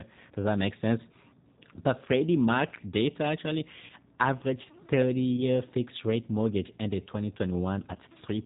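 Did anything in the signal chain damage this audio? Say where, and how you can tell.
Yes. The codec stage damaged the whole clip: the speech has been through a G.729 codec, and the damage is plainly audible. The audio is rebuilt from a vocal tract filter, a pitch predictor and a few pulses per 5 ms subframe, at a rate that fits 8 kbit/s. Nothing above 4 kHz survives, so the speech sounds band-limited, slightly rough and synthetic, with a buzzy, modelled quality rather than a natural one.

The network stage adds VoIP packet loss concealed by the speech codec at 1.76–1.80 s, 3.85–3.91 s, 5.37–5.43 s and 7.94–7.97 s. When packets go missing, the decoder repeats its last pitch and filter at falling gain, so each spot turns briefly buzzy or smeared. The 3.85 s event is longest, consistent with about 40 ms of lost frames against roughly 10 ms elsewhere, and the speech stays weak for a moment as the decoder recovers.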